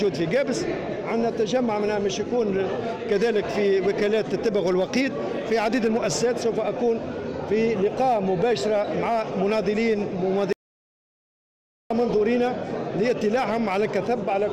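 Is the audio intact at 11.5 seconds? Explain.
No. At 11.5 seconds the audio is in the middle of an audio dropout to silence that runs from 10.53 to 11.90 s. The sound cuts off abruptly and the gap is completely dead, with no room tone or background at all, until it resumes mid-flow after about 1.38 s. The likely cause is a momentary loss of the input signal, such as a disconnected device, a failed link or a stray mute, while the recorder kept writing silence. Whatever sounded during that span is lost.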